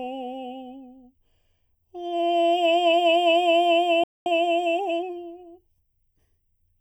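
Right from the start the music has that hollow, phasey quality you get from channel delay (comb filtering). One channel is trailing the other by something like 0.4 of a millisecond, and once the two are folded to mono the shared content cancels at a series of evenly spaced frequencies. The first notch lands somewhere around 1.5 kHz, which leaves fixed notches in the sound for the whole clip.

At 4.04 s the music just drops out, dead silent for about 223 ms, and comes back in at 4.26 s. That's a playback stall, most likely the player running dry on data or its audio thread getting held up, so the output had nothing to send until it recovered.

Straight after that, from 4.26 s to 5.14 s, you get the time-compressed catch-up. The player is clawing back the backlog by snipping out small slices and cross-fading across the gaps, so the music runs about 1.25 times faster while staying at its normal pitch. 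It comes across as rushed until it settles back to normal speed at 5.14 s.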